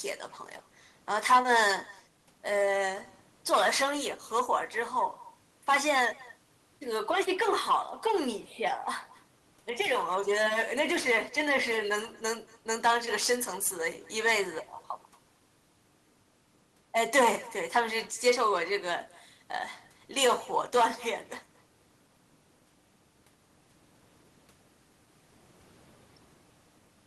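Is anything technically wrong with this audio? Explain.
Yes. An echo with no canceller runs through the whole speech clip. The far end is playing the call on a loudspeaker. Its microphone picks that playback up and sends it back, and nothing strips it out. So every phrase returns after about a fifth of a second, the network round trip. The copy sits about 24 dB below the direct speech. It sounds faint and thin, a ghostly shadow trailing each phrase. The low room noise underneath is simply part of the recording.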